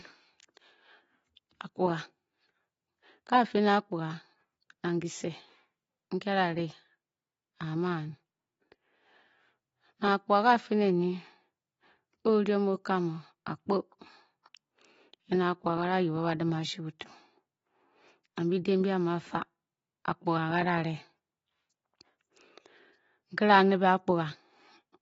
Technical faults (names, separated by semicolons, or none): AAC compression